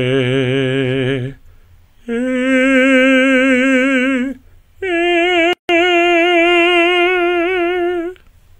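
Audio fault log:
5.53 to 5.69 s, gap at a join of encoded pieces: the music drops out for about 160 ms, then carries on exactly where it left off. Two separately encoded sections were joined without trimming, so the encoder's start-up silence and the padded final frame both remain at the seam. Unlike a dropout or lost packet, nothing of the music is skipped, and the edges are softened by the codec rather than cut cleanly.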